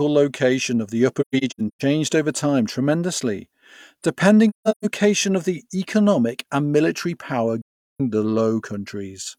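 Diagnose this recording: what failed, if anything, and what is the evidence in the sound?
The codec stage failed through AAC frame loss with muting. Three soft-edged gaps break the speech: 1.21 to 1.82 s, 4.49 to 4.85 s and 7.61 to 8.01 s. The first two are broken holes, with 384 ms and 299 ms of sound missing and the longest silence around 150 ms. The third removes 384 ms. The decoder zeroed the spectrum of the missing frames, and the overlapping windows fade the sound out and back in.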